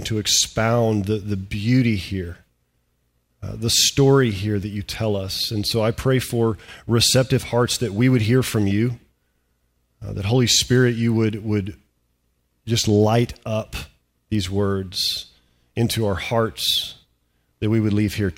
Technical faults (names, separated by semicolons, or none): none